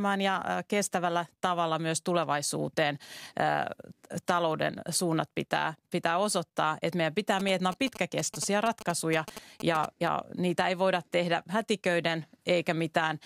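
From 7.40 to 10.08 s, between "meidän pitää" and "niitä ei voida tehdä", GSM signalling bursts from a nearby 2G phone, rectified by the audio circuit, add a galloping dit-dit-dit of short 217 Hz buzzes about 10 dB below the speech. They appear as clustered vertical stripes on a spectrogram and grouped spikes in the waveform.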